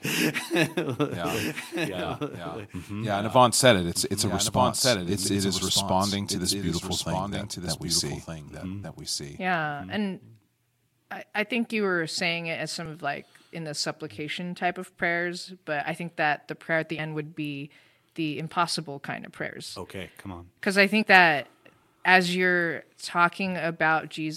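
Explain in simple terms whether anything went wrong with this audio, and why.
A doubled audio track runs from 1.23 to 9.97 s. A second, somewhat quieter copy of the speech trails about a second behind, likely because it was captured twice through a slower route. It starts and stops abruptly, with no echo tail.

Compressed frames are skipped at 8.83 s, 12.82 to 12.86 s (between "were saying it as" and "of like in the"), 16.98 s (between "the prayer at the" and "would be the impossible"), and 21.0 s (just before "that as you're"). Missing chunks of a few hundredths of a second make the speech jump forward.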